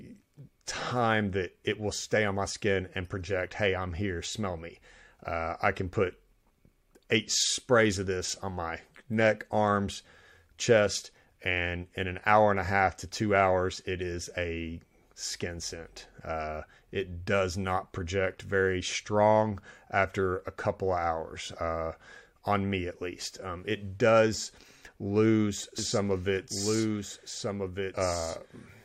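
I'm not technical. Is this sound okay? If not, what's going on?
No. From 25.79 s to the end there's a doubled audio track: a quieter copy trails about one and a half seconds behind, likely from a second capture path.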